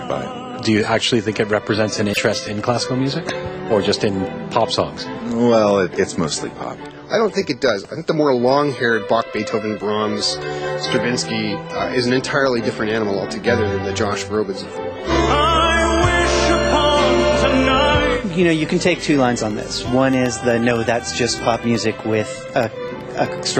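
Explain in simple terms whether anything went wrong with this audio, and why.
Two things went wrong. At 2.13 to 2.18 s, a likely broken MP3 bit reservoir: after a cut, one frame read another frame's data, so the sound briefly garbles and skips ahead.

From 19.01 to 23.51 s, periodic USB or driver dropouts: something blocks the audio every 0.125 s, dropping a tiny sliver to silence. That causes about 40 evenly spaced ticks.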